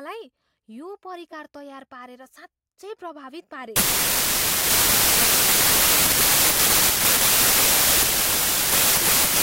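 From 3.76 s on, a wrong sample width, fitting 32-bit data read as packed 24-bit, buries the speech in loud noise, slowed to 0.75 speed.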